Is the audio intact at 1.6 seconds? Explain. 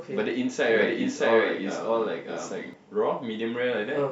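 No: a doubled audio track runs from 0.66 to 2.74 s, likely from a second, slower capture path, adding an equally loud, dry copy about 0.7 s behind.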